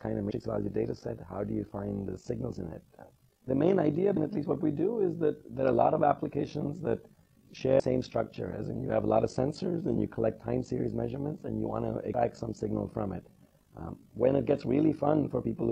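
From start to finish the sound carries overlap-add ripple: frames rejoined with overlapping windows that don't sum to constant gain, so level dips by about 11 dB once per frame, around 50 times a second. Unlike musical tremolo, this flutter is rigidly regular, rough and robotic.

Damaged data in a compressed stream then breaks through at 0.30–0.32 s, 4.16 s, 7.79 s and 12.14 s. Each time the decoder misreads corrupt frames and resynchronises, producing a short glitch.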